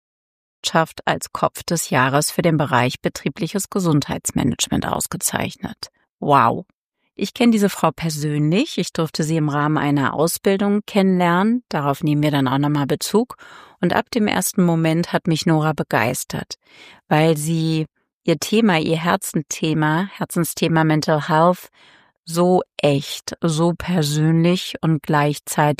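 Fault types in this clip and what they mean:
Nothing stood out on listening, apart from the smooth fade-in ending about two thirds of a second in.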